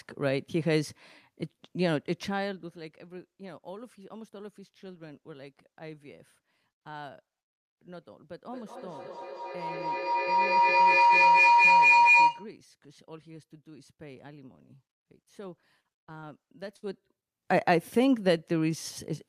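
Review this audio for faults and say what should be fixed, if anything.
Feedback howl, 8.51 to 12.57 s: two devices on the call share a room, so sound loops from loudspeaker to microphone and grows with each pass. It narrows to a tone around 1 kHz, pulsing roughly every fifth of a second and peaking about 7 dB above the speech. Mute one device, or keep devices sharing a room on a single audio connection.

Repeated packet loss (robotic sound), 15.61 to 16.25 s: data went missing or arrived late five times in quick succession, the longest gap 39 ms. Each hole was patched by extending the last sound, about 120 ms filled in all, giving choppy audio with about 140 ms lost. Improve the network path, for example with a wired connection or less competing traffic.

Burst of packet loss, 16.77 to 16.84 s: a run of audio about 60 ms long failed to arrive in time. The receiver stretched the preceding sound for about 58 ms while fading it, then resumed further on, skipping the missing section. 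A steadier connection or a larger jitter buffer would prevent it.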